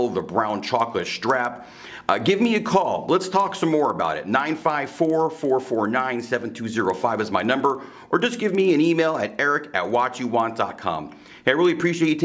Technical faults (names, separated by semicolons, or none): resampler restarted on every block